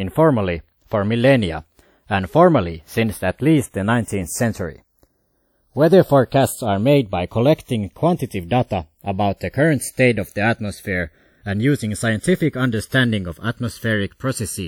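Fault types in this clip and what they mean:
Channels drifting apart: separate clocks around 50 ppm off let the delay between channels creep to under a millisecond, so the mono speech flanges slowly throughout.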